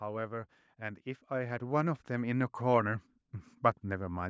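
From 0.05 s to 3.09 s the level climbs steadily as automatic gain rising takes hold. The gain control judged the input too quiet. It then raised its gain bit by bit, by about 12 dB in all. Speech and background noise swell together, since the control cannot separate them. The rise is slow and even, spread over about three seconds. The call microphone processing stays in the path, with nothing above 8 kHz.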